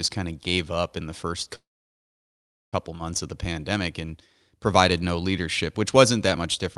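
From 1.55 to 2.75 s, a call audio freeze: packets were likely held up in transit, leaving the jitter buffer empty. The last sound is briefly stretched and then drops to silence for about 1.1 s. The speech resumes where it stopped, now 1.17 s later, with nothing lost.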